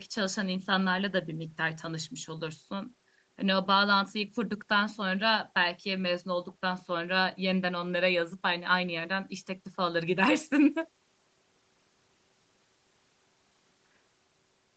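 No technical faults are audible.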